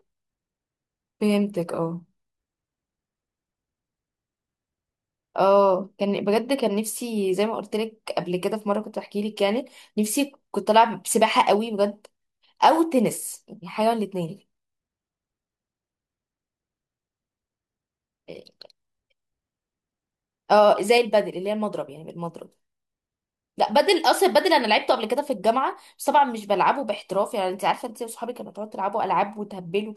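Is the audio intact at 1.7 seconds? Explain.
Yes, at 1.7 seconds the speech plays through intact, with no dropout, click, distortion or other fault at that moment.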